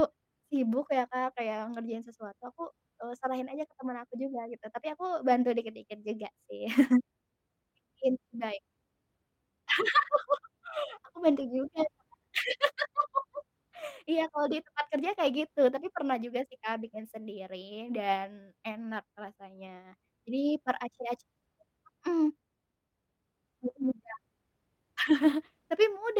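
At 10.09–10.11, 11.27–11.41, 16.83–16.89 and 25.05–25.11 s, lost packets were rebuilt from error correction: low-bitrate copies fill 20, 80, 40 and 40 ms, so there is no gap. These stretches sound rougher and noisier, appearing as smeared, grainier patches with no silent break in the waveform.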